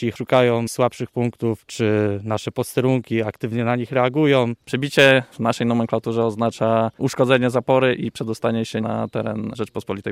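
Hard clipping hits the peaks at 0.34–0.40 s, 4.99–5.12 s (overdriven by about 4 dB, the harshest), 7.34 s and 7.71–7.76 s: flattened tops add sharp crackle, unlike soft saturation's gradual warmth.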